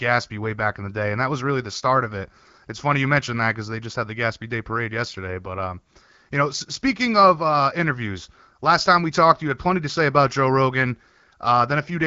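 No faults found in this speech; the bandwidth tops out around 7.5 kHz, consistent with an AMR wideband (HD Voice) path at a mid rate such as 12.65 kbit/s.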